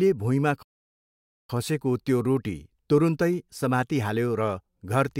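At 0.62 s the speech cuts out abruptly and the output stays silent until 1.50 s, a gap of about 0.86 s, before the sound picks up again. This is a playback stall: the likely cause is that the player's buffer ran dry or its audio thread was held up, so nothing reached the output until data flowed again. The break lands mid-flow rather than at a natural pause, which makes it stand out clearly.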